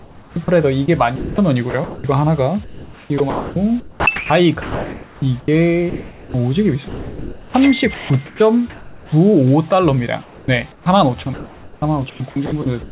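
Four choppy stretches run from 0.0 to 2.04 s, 2.64 to 6.34 s, 6.88 to 9.12 s and 10.22 to 12.91 s, the likely cause being sound chopped by the voice detector. In each, quieter portions drop out and are filled with synthetic comfort noise, about 0.84 s, 2.26 s, 1.38 s and 1.26 s respectively. The band stops at 4 kHz, which fits a G.711 A-law call path.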